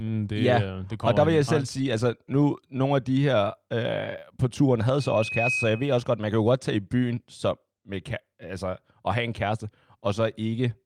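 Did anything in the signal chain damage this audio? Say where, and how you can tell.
Yes. The damage comes from the acoustic path between a loudspeaker and the microphone feeding it, which produces loudspeaker feedback squeal from 5.00 to 6.06 s. At 2.5 kHz the loop gain went above one, so that frequency kept recirculating and growing on its own. It swells over roughly half a second into a steady whistle about as loud as the speech, then stops at 6.06 s once the loop is broken.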